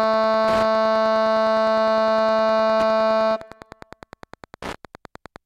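Music with a steady ticking throughout, about ten clicks a second, roughly 20 dB below the music. This is Wi-Fi interference: a nearby radio's beacon every 102.4 ms is being rectified by the audio circuitry.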